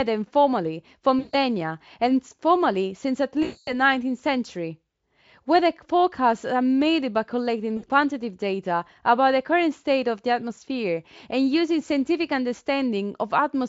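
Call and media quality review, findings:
VoIP packet loss concealed by the speech codec: 1.19–1.36 s, 3.43–3.82 s (worst), 7.77–7.87 s. The decoder repeats its last pitch and filter with falling gain, giving a buzzy, fading smear rather than a silent gap. The Speex coding itself adds little or no damage.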